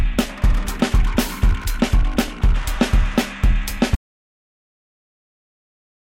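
At 3.96 s the music cuts off mid-flow and never returns. The final 2.1 seconds are dead digital silence, with no room tone, reverb tail or hiss left behind. This is an audio dropout to silence, where the audio input was most likely lost, through a disconnected device, a failed link or an accidental mute, while recording carried on writing silence. Whatever the music did after that point is gone.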